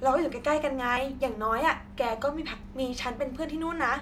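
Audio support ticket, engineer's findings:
Skips at 0.97 s and 1.85 s in speech, each with a jump forward of about 5 ms. Likely a dropped buffer (overrun) at capture: samples overwritten before being read, ends spliced directly. Unlike a dropout, there's no silent gap, just a skip.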